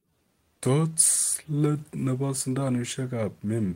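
Right through the speech there's clock drift between sender and receiver: the sender's clock runs about 4 percent slow, so the receiver's jitter buffer keeps draining and the audio never quite holds a steady pace. It comes across as faint, uneven timing wobble rather than any single glitch.

From 0.05 to 3.67 s the receiver answers that with repeated timing corrections, padding the stream by repeating short slivers to keep from running dry. Playback lands at about 97 percent speed, around 150 ms stretched overall, heard as small hiccups and a slightly dragging tempo.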